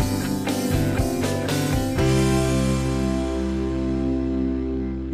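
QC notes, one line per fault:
No technical faults can be heard anywhere in the signal.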